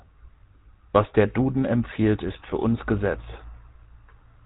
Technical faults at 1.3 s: GSM full-rate codec

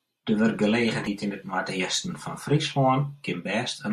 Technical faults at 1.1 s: damaged data in a compressed stream

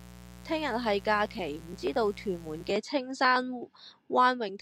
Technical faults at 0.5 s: mains buzz

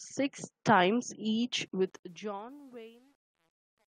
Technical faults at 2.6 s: truncation distortion on a fade

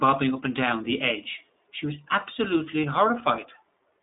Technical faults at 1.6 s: iLBC codec

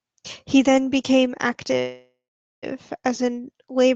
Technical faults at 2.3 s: call audio freeze

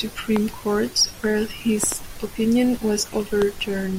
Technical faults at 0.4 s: loud pop

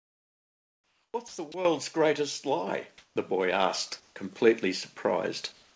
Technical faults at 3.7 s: microphone volume stepped up

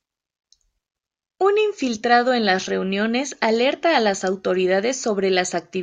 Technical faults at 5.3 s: none

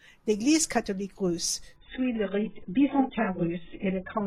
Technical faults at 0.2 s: none

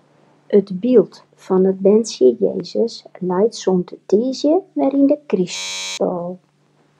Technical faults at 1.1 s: none

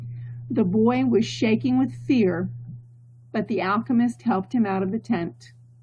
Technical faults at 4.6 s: none

